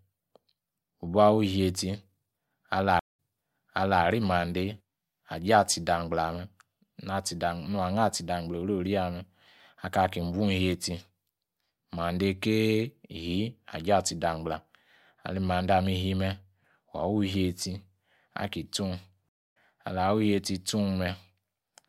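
Stream reconnects at 2.99–4.03 s (0.18 s gap, resuming 0.86 s earlier, repeating audio) and 19.29–19.57 s (0.26 s gap, resuming slightly later, skipping audio), each restarting the decoder mid-stream.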